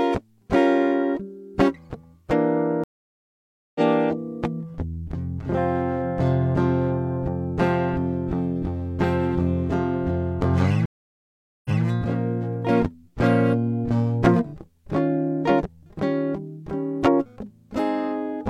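The music drops out twice with a stream reconnect. At 2.84 s it goes silent for about 0.91 s, then picks back up around 3.81 s roughly half a second further along, so a chunk is simply skipped. At 10.86 s there's another gap of about 0.79 s, and when it resumes at 11.83 s it's 186 ms behind where it stopped, so you hear a short bit again. Each time the connection broke and the player restarted its decoder mid-stream.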